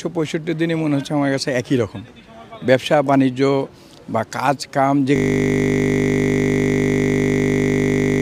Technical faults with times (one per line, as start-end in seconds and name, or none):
5.16-8.22 system hang loop